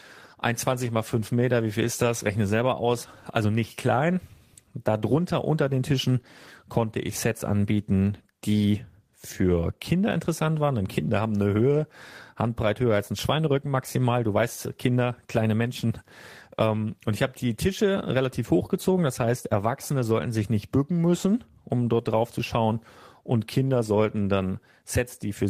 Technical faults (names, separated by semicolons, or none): none